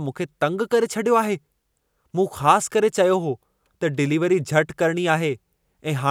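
No technical faults can be heard anywhere in the recording, with the signal holding steady and intact throughout.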